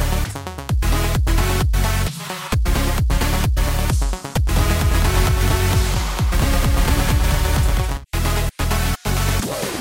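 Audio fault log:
4.47 to 7.97 s, doubled audio track: a full-band copy trails about 200 ms behind, roughly 5 dB down, cutting in and out abruptly, likely a second capture path running late.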